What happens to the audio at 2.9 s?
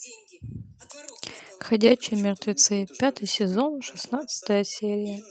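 Nothing goes wrong at 2.9 s; the speech continues intact through that moment with no fault present.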